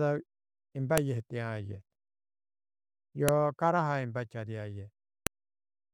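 At 0.98 s there is a sharp, loud click. Two more follow, at 3.29 s and 5.27 s. Each is a file header played as audio. The speech appears to be built from separate WAV pieces joined without stripping their headers. Those few dozen header bytes get read as sample values. The result is a brief, hard snap at the start of each piece. It cuts across the speech regardless of what the signal is doing.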